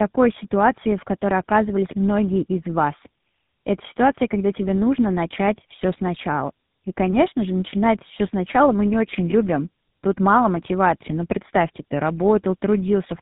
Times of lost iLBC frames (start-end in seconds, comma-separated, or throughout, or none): none